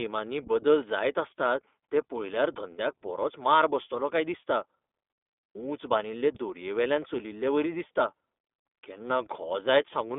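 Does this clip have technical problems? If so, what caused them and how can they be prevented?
Yes, the whole clip has gone through the iLBC codec, and you can plainly hear it. The speech sits in a phone-line band of roughly 250 Hz to 3.6 kHz, with nothing at all above 3.8 kHz, so it sounds thin and boxy. The codec rebuilds the excitation for each short frame on its own, which points to 20 ms frames at the 15.2 kbps mode, and that gives the speech its slightly rough, synthetic edge. To prevent it, record or send the speech over a wideband codec such as Opus at a decent bitrate instead of a narrowband VoIP link.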